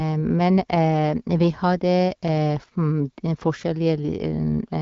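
No technical faults are audible anywhere in this speech.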